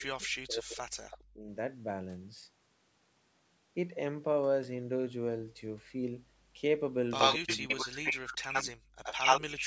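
Speech suppressed in double talk runs from 0.0 to 1.49 s: the speech sinks by as much as about 40 dB, likely because an echo canceller, faced with both sides talking, turned down its own talker along with the loudspeaker echo. Inside that stretch, at 1.11 to 1.18 s, a brief echo leak appears: a faint copy of the speech, well below it, trailing by 79 ms, likely echo the canceller failed to remove from a loudspeaker-fed microphone.

The echo leak returns far more strongly from 7.18 to 8.35 s, louder than the speech itself. Speech suppressed in double talk overlaps it from 7.36 to 8.82 s, again dipping deeply. Further echo scraps follow at 8.53 to 8.65 s, level with the speech, and at 9.03 to 9.63 s, clearly above it, each still 79 ms behind.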